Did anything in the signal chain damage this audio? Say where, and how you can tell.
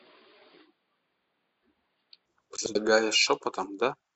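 Yes. From the start to 2.26 s the audio is band-limited, with nothing above 4.8 kHz, and it has a different, boxier tone. At 2.26 s the full band returns with no silence and no step in level. A faint new noise floor, far below the speech, sits under that opening stretch. This is likely an input switched to a poorer device, a fault at the driver or device stage. A codec's low-pass would hold for the whole clip. Here the band, tone and noise all change together at a single instant, which points to different hardware.

Between 2.57 and 2.76 s there is a brief garbled flutter. The stretch consists of two adjacent blocks of about 93 ms each, played with their order swapped, which fits runs of four frames. These are frames out of order, introduced at the network or storage stage, where the packets were delivered or reassembled in the wrong sequence before decoding. Packet loss would leave a gap, a concealment smear or a repeat. 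Here nothing is missing, and the timing after the swap stays intact.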